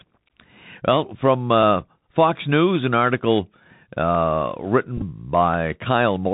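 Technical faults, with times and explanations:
Throughout: Bluetooth CVSD headset codec. Everything above 4 kHz is missing, leaving the speech narrowband and boxy. Loud high sounds outrun the adapting step size and distort, s sounds turn scratchy, and a granular hiss sits underneath, which is the one-bit delta coder's own texture rather than background noise.
4.15 s: dropped samples. A single sharp click, heard as a thin vertical line across the spectrum. It is most likely a few samples missing, roughly 0.3 ms, so the waveform jumps ahead. Unlike a packet repeat, it makes no buzz and no sound goes missing.
4.97 to 5.03 s: Bluetooth headset packet repeated. Losses totalling 18.8 ms are scattered over 45 ms, which fits about five lost voice packets. The chip re-decodes the previous packet's bits instead, and the longest run, about 7 ms, repeats every 3.75 ms, giving a brief buzz near 267 Hz rather than a single click.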